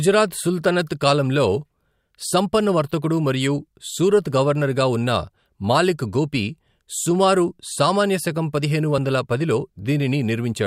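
The likely cause here is a dropped buffer (overrun) in this speech clip: the capture software appears to have fallen behind, letting the hardware overwrite a block of samples before they were read, so that short stretch never reached the recording. At 8.98 s, just after "సుమారు సామాన్య శకం పదిహేను", the audio on either side is butted together with no gap, giving a tiny forward jump in the sound, with only a few milliseconds lost.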